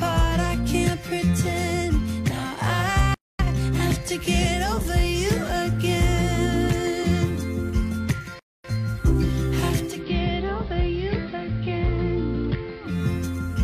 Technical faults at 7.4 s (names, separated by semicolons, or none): none